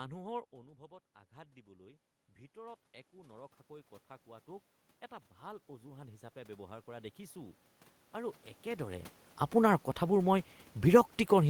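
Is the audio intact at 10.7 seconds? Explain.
Yes, the audio is intact at 10.7 seconds, with no technical fault in the speech at that moment.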